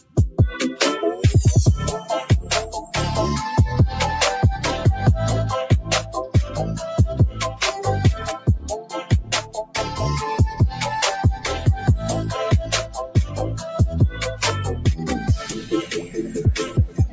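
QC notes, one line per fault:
Throughout, noise suppressor applied to music or sounds: a speech-oriented suppressor stays engaged across the whole clip, judging sustained tones, ambience and reverberant tails as noise. The level of held material swings by roughly 10 dB as the gain rides up on attacks and down on anything steady, so the sound pumps and thins rather than sitting at a stable level. The bandwidth tops out at 8 kHz, consistent with call microphone processing.
0.00–0.39 s, 8.38–9.76 s, 12.85–13.39 s, 15.19–16.39 s, 16.67 s to the end, sound cut by the noise suppressor: in each span the suppressor pulls the sound down further than its surroundings, by about 15, 14, 10, 11 and 13 dB respectively at the deepest point. The first, third and last dips affect roughly a third of a second; the second and fourth about a second each. Steady or decaying portions sink and tails are clipped short, while transients mostly survive.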